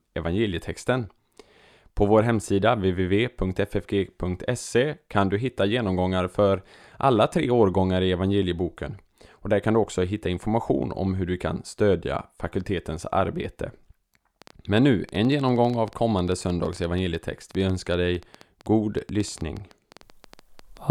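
From 14.42 s to 20.78 s, an uneven ticking runs over the speech and through its pauses, about 8.3 clicks per second, some fifty in all, peaking roughly level with the voice. This train of clicks likely comes from interference or a faulty connection.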